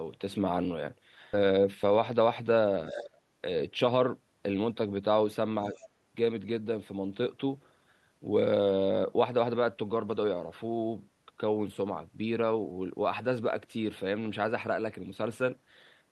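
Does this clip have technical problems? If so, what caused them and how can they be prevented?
Yes. A skip ahead occurs from 1.33 to 1.35 s: roughly 0.7 s of speech is missing, and the two sides are butted together with no fill. Unlike a dropout, there is no silence or concealment, just an abrupt jump forward. Sizing the jitter buffer to drain gradually rather than discard on overflow prevents it.

From 1.43 to 2.54 s a jitter buffer speed-up makes the speech run at about 109% speed, cutting roughly a tenth of a second in small pitch-period pieces. The pitch stays put, which separates it from a sample-rate mismatch. Spreading the catch-up over a longer stretch avoids the hurried sound.

The talker's level dips sharply, by about 20 dB, from 2.90 to 3.17 s, and more mildly, by about 5 dB, at 5.72 to 5.77 s. This is likely speech suppressed in double talk by the echo canceller. It tracks the far side's activity rather than the talker's own dynamics. 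Better double-talk detection or a headset prevents it.

From 5.74 to 5.87 s a faint second voice, about 25 dB below the speech, comes through briefly. This is likely the other side's voice leaking through from the loudspeaker. It is a distinct foreign voice rather than a level dip. Stronger echo cancellation or headphones would stop it.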